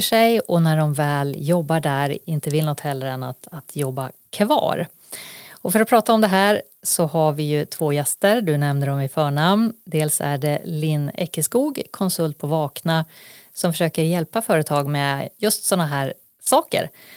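Nothing is technically wrong with this speech recording.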